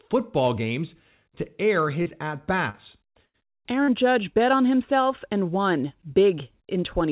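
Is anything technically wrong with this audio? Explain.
Yes, the speech has dropouts from network loss, heard through a narrowband call path with nothing above 4 kHz, which points to a G.711 A-law codec at 64 kbps.

At 2.02 to 2.08 s, 2.70 to 2.76 s and 3.84 to 3.90 s there are brief smears or wobbles. This is short concealed packet loss: about 40 ms went missing each time, and the receiver extended the preceding sound over the hole.

At 3.26 to 3.36 s a held buzz or fading hiss replaces the speech. This is a burst of packet loss. About 80 ms was lost, and the concealment continued the last sound and faded it before the audio resumed further on.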